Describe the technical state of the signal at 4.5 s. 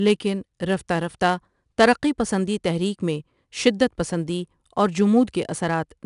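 At 4.5 s the speech is still passing through 4-bit ADPCM compression, as it does for the whole clip. Each sample is coded as a coarse 4-bit step from a predicted value, so the leftover error rides along as broadband noise that rises and falls with the speech level. That is plainly audible here as gritty hiss on louder syllables. Nothing sounds above 10.6 kHz, and the bitrate is roughly 89 kbps.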